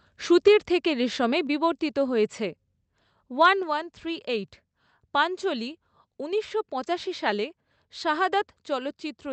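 Speech clip whose level drops abruptly by about 3 dB at 0.48 s and again at 3.63 s, voice and background together. Each step is likely the call software stepping down the microphone volume after judging the input too loud.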